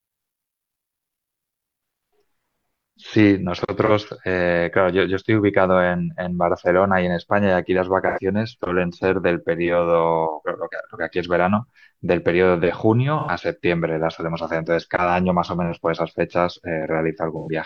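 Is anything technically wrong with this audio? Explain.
Yes. AAC frame loss with concealment occurs at 3.85 to 3.91 s (43 ms, fitting one lost frame), then at 8.07 to 8.19 s, 13.19 to 13.30 s and 17.38 to 17.49 s (85 ms each, fitting two frames). The decoder rebuilds the missing frames from the last good spectrum, so the speech turns briefly smeared and phasey. On a spectrogram each gap shows as a blurred, noise-like block, and the waveform loses its detail there.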